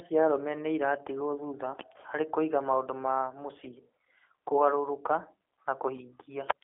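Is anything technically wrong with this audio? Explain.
Yes. Throughout the speech, G.729 codec damage is plainly audible. The codec rebuilds the speech from a vocal tract filter, a pitch predictor and a few pulses per frame, a coarse model consistent with 8 kbit/s, so it sounds rough and synthetic, with nothing above 3.5 kHz.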